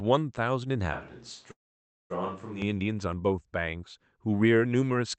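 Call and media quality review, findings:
Switch to a distant microphone, 0.93 to 2.62 s: close mic signal likely dropped, pickup falls back to a farther mic. Sound abruptly turns roomy and hollow, thinner low end, level down about 5 dB, room noise rising to roughly 30 dB below speech.

Call audio freeze, 1.51 to 2.12 s: packets likely delayed in transit, jitter buffer underran. Receiver extends the last sound briefly, then about 0.55 s of silence. Playback resumes where it stopped, adding about 586 ms of delay with nothing lost.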